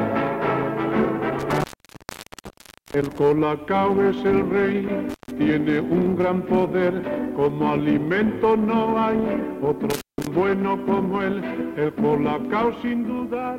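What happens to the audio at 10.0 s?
Intermittent contact, 9.90 to 10.27 s: a loose connection opens for 170 ms, cutting the sound to faint hiss, with crackle at each edge.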